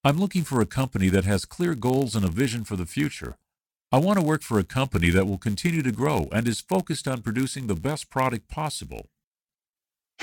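Block size mismatch (padded), present from start to finish: one stage hands over blocks slightly shorter than the next stage expects, and the shortfall in each block is filled with silence. Those tiny zero-filled gaps recur about 99.6 times per second, producing a steady buzz near 99.6 Hz laid over the sound. Because silence is added to every block, the audio runs at 0.996 times its proper speed, while its timbre stays essentially unchanged.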